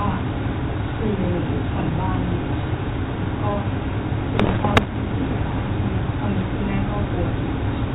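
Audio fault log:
4.35–4.91 s, bit errors on an ADPCM link: over this half-second stretch of speech, the light hiss of the 32 kbit/s G.726 link gives way to clustered pops and rough, gritty bursts with brief jumps in level. Something like one bit in a hundred is flipped. Each corrupted sample also throws off the decoder's adaptive step size and predictor, so every error smears into several milliseconds of distortion rather than a single click.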